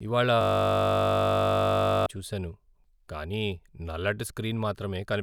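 From 0.41 s to 2.06 s the speech gives way to a system hang loop: the host or driver stalled while the audio hardware kept replaying one 20 ms stretch of its ring buffer, some 80 times over, producing a steady 50 Hz buzz.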